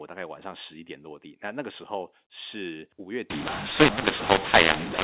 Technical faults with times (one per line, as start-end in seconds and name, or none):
3.30-5.03 mu-law and A-law mixed up